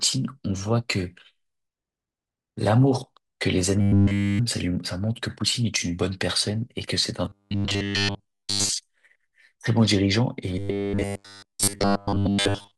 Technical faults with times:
3.81-4.39 robotic sound from repeated short buffers
7.26-8.70 robotic sound from repeated short buffers
10.58-12.77 robotic sound from repeated short buffers

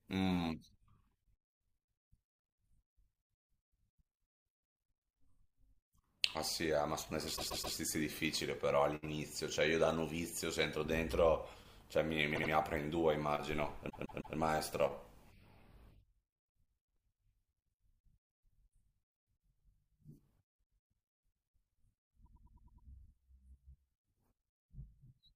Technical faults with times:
7.35-7.75 repeated frames
12.34-12.50 repeated frames
13.89-14.36 repeated frames

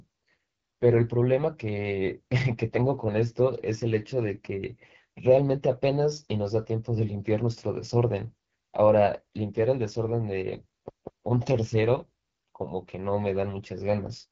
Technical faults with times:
0.00-14.31 AMR wideband (HD Voice) codec
10.89-11.27 CD stuck on one turn

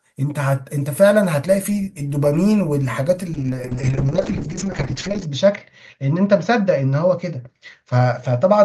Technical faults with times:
3.34-8.64 call bitrate drop

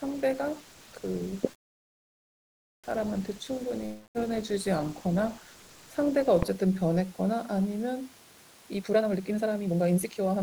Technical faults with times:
1.51-2.87 call audio freeze
3.86-4.18 long network dropout
8.77-10.43 jitter buffer speed-up

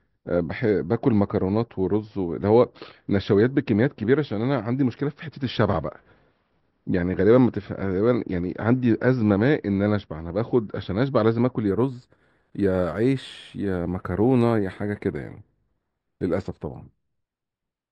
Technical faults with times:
11.68-17.92 imaging from linear upsampling

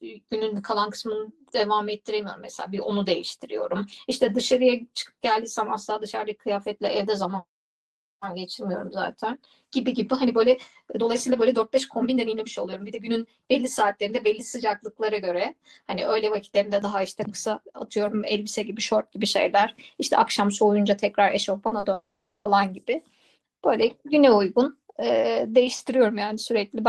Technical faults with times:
0.00-16.82 channel delay (comb filtering)
21.67-21.85 short concealed packet loss
21.93-22.47 long network dropout

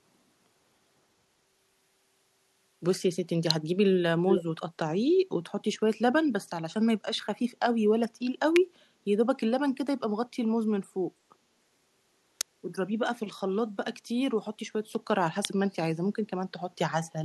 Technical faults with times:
3.51 electrical switching spike
4.29-4.43 echo leak
8.56 electrical switching spike
12.41 electrical switching spike
15.45 electrical switching spike

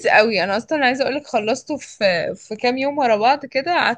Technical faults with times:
none

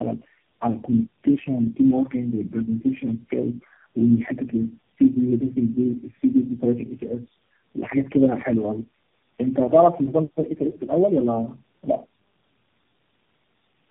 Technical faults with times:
0.00-13.91 tandem speech coding

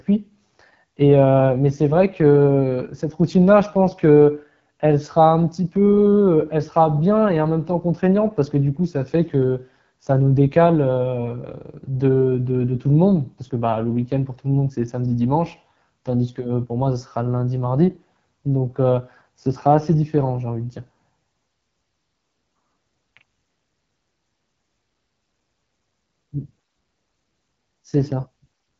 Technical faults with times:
0.00-28.80 AMR wideband (HD Voice) codec

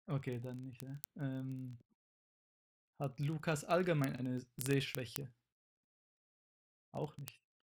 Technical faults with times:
0.11-7.66 word clock ticks

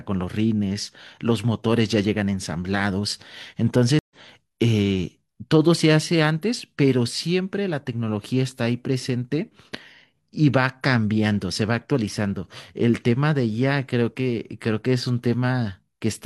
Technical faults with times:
3.99-4.15 stream reconnect

